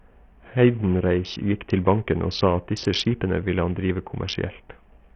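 From start to finish the speech sounds gritty and thin, with the treble dropping out and flickering in and out, and a coarse, rough noise with aliasing hanging on every syllable. The damage is heavy and points to a very low bitrate, around 48 kbps. The likely cause is Bluetooth SBC compression: with so few bits to share out, the codec's upper sub-bands go unfunded and the rest are crudely quantised.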